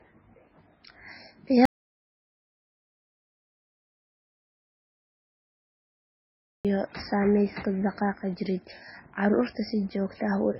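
From the first moment the speech carries the marks of low-bitrate audio saved at a high bitrate. Nothing is present above 5.6 kHz, so sibilants and breath sounds are dull, and the swirly, smeared texture of heavy MP3 coding is audible throughout. That combination points to a very low-bitrate first encode, on the order of 16 kbit/s, that was likely re-encoded at a much higher bitrate. The second pass cannot restore the missing band or remove the artefacts.

At 1.65 s the speech cuts off abruptly and does not return until 6.65 s, an audio dropout to silence lasting about 5.0 s. The gap is silent with no room tone or noise floor. This is the typical result of the input signal being likely lost, through a disconnect or mute, while the recorder kept writing samples. Whatever occurred in that span is gone.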